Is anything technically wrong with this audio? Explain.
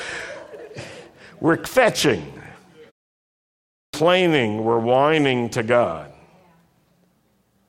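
Yes. At 3.57 s, after a 0.74 s pause, there is a clipped start after a pause. The output device slept through the silence and needed about 0.36 s to wake, so the speech bursts in abruptly without its opening sounds. Unlike muted pauses, this loses speech, not just background.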